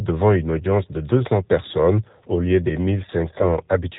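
Throughout, the G.729 codec at 8 kbit/s is plainly audible: nothing above 4 kHz, and a rough, synthetic edge from pulse-based rebuilding rather than the smeared swirl of transform codecs. From 3.38 to 3.46 s, VoIP packet loss concealed by the speech codec stretches about 20 ms of missing audio, which points to a single lost packet, into a fading extrapolated sound. Recovery lingers after the gap, unlike a clean dropout's abrupt silence.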